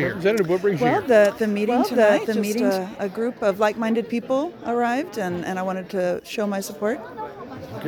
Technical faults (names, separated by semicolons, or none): doubled audio track